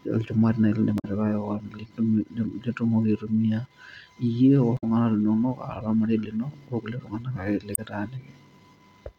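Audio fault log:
0.98–1.05 s, 4.77–4.84 s and 7.74–7.79 s: damaged data in a compressed stream. Each burst is a brief chirp or blip lasting 46 to 70 ms; the first comes right after "olchumati naaji lindim". Corrupted bytes in the encoded speech make the decoder misread those frames, lose its place in the stream and hunt for the next valid frame header. The garbled output during that search is heard as the short squawk.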